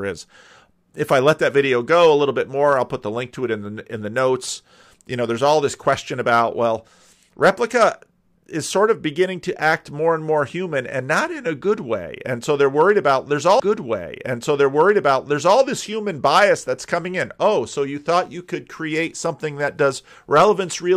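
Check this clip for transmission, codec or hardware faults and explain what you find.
One transmission fault is present. From 13.59 to 15.58 s, after "they're worried about there's", a stream segment is repeated: the player queued the same 2.0 s chunk twice, so the speech replays with a blip at the jump, visible as a duplicated waveform block and a vertical discontinuity before "this human bias that's".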